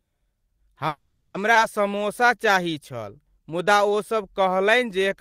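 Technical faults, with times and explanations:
0.87–1.36 s, call audio freeze: the sound stalls for about 470 ms. The last sound carries on as a fading buzz-like fill that ends in roughly 10 ms of near-silence, then the audio resumes exactly where it stopped with nothing lost. This is likely a run of delayed packets draining the jitter buffer, with the receiver extending the final sound until data arrived, so the stall adds delay to the stream.
1.54–1.57 s, skip ahead: playback jumps forward with only a brief fill of about 10 ms at the join. Roughly 300 ms of audio is gone, and the material on either side is butted together almost directly, giving an abrupt discontinuity. Audio was discarded while later packets were already queued, either lost in transit or dropped when the jitter buffer overflowed, which pulls the delay back down.
1.88–5.17 s, jitter buffer slow-down: over this stretch the audio runs at about 92% speed with pitch unchanged, adding roughly 268 ms in total. 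Sounds are drawn out. With its reserve low or its target delay just raised, the receiver rebuilt the buffer by repeating individual pitch periods and short pause segments many times over, stretching the timing without shifting the frequency content.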